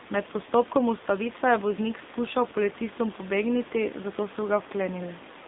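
The whole clip runs through an AMR narrowband mobile codec, so everything above 3.8 kHz is gone and the line band sits at about 200 Hz to 3.7 kHz. The speech comes out plainly buzzy and synthetic, which fits a low AMR-NB mode around 7.4 kbps, and the room noise about 16 dB down picks up a swirl too.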